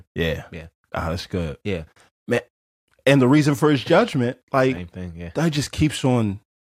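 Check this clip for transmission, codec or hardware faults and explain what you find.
One transmission fault turns up: DAB burbling at 4.76 s. Weak reception let bit errors, at a rate of a few tenths of a percent, slip past error correction into the MP2 data, corrupting samples so short blips of noise land in single sub-bands, apparently across a few frames. The speech gets a brief burble.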